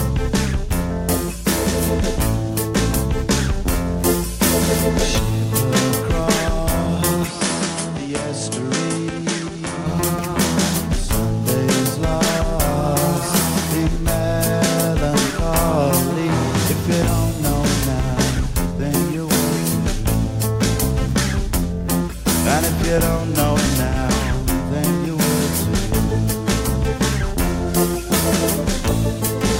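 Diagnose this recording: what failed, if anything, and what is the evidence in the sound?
From 7.27 to 9.86 s nothing comes through above 10.9 kHz, level dips about 5 dB and faint new noise appears, with no gap: likely the driver's input switched to a poorer device.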